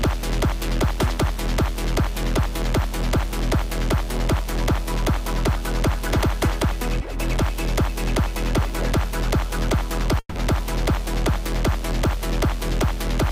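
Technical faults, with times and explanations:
10.19–10.37 s, long network dropout: the sound smears into a fading buzz, then about 40 ms of silence. It resumes with a gap, likely from lost packets.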